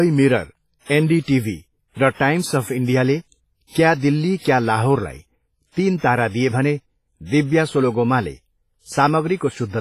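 Heavy WMA compression damage runs through the whole speech clip. The sound rings and smears, with a washy hiss that swells and fades with the signal. Nothing is heard above 15.4 kHz. This is likely a transform codec at a low bitrate, about 24 kbps.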